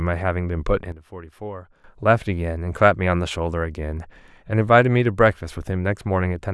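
Speech that abruptly drops by about 12 dB at 0.92 s and snaps back to full level at 1.84 s, with the background noise falling and returning together with the speech, so the whole signal turns quieter at once rather than fading. This sudden gain jump is likely the result of a digital gain change applied between one sample and the next with no ramp, such as a level setting or bit shift switched in and then out.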